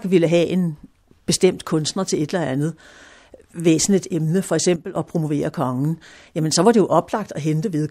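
At 4.76 s the speech and its background noise drop abruptly together by about 10 dB, staying low until 4.96 s before coming back up. This sudden gain jump likely comes from a digital gain change applied instantly from one sample to the next, with no ramp.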